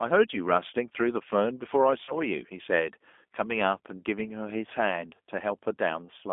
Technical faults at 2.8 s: G.729 codec

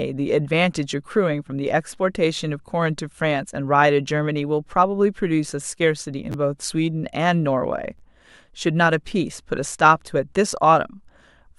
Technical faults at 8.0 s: chunks out of order

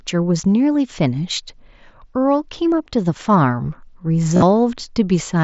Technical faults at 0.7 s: concealed Bluetooth headset packet loss

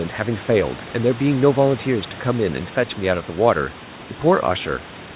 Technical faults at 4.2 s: none

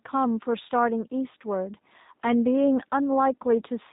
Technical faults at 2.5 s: G.729 codec

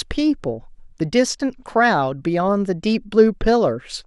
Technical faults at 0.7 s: MP2 compression

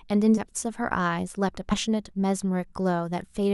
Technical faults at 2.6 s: none

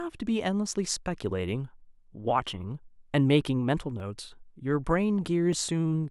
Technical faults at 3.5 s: clock drift buffer slips

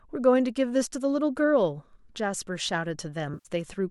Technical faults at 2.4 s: none

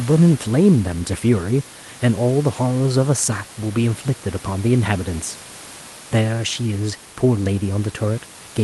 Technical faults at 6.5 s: none

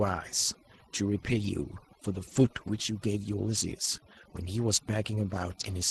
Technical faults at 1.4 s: overdone noise removal; lost packet rebuilt from error correction

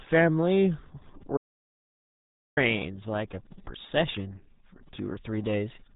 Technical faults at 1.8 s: RealAudio 14.4 codec; audio dropout to silence

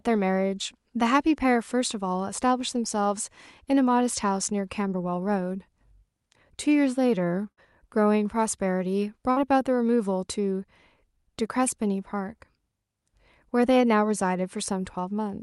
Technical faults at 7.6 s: burst of packet loss

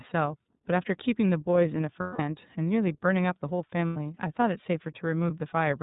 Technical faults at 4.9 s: iLBC codec

